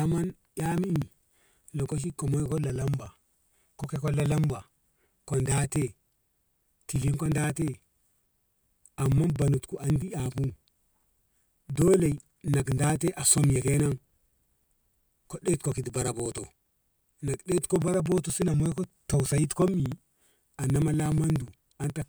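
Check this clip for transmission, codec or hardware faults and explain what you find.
One hardware fault is present: periodic USB or driver dropouts, from 0.06 s to 22.02 s. Every 60 ms roughly 4 ms of speech is skipped by a stalled bus or driver. The result is steady ticking, with evenly spaced waveform jumps and thin vertical spectrogram lines.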